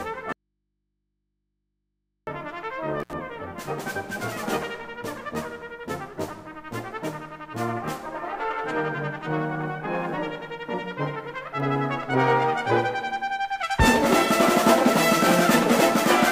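From 0.33 to 2.27 s the sound cuts out abruptly for about 1.95 s, leaving only mains hum far below the signal, a likely dropout to a faint residue rather than a pause or fade. At 3.00 to 3.13 s an intermittent contact opens for about 65 ms, a brief break up rather than a sustained gap.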